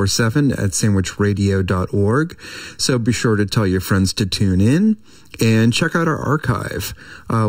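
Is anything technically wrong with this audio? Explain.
Yes. Throughout the speech there is channel delay (comb filtering). One channel arrives just under a millisecond late, and summing to mono cancels shared content at evenly spaced frequencies. The first notch sits around 700 Hz, with further notches higher up, leaving the speech hollow and phasey.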